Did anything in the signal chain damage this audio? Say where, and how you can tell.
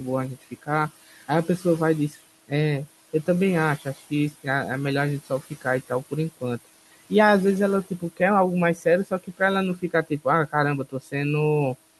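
Yes. Noise suppressor artifacts from call processing run throughout: the room noise, about 17 dB below speech, is pulled down about 16 dB between phrases, then rises underneath speech.

Speech cut by the noise suppressor, also in call processing, appears at 0.41–1.65, 3.80–4.46, 5.25–6.66, 8.75–9.41, 9.76–10.54 and 10.85–11.14 s. Brief fragments, roughly 150–200 ms in each span, sound swallowed, attenuated about 14–18 dB as if they were noise.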